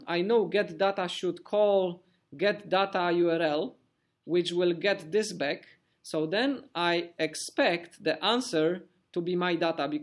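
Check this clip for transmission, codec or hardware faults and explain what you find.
No transmission, codec or hardware fault is audible anywhere in the clip.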